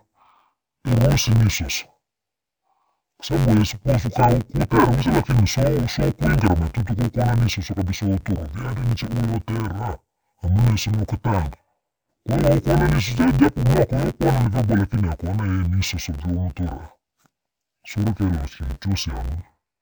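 Speech, affected throughout by interleaved audio read as planar. Each 10.88 ms block of alternating left and right samples is split into halves and played as separate channels. With blocks this short, the sound is dull and robotic, with a buzz at about 92 Hz and no clear octave drop.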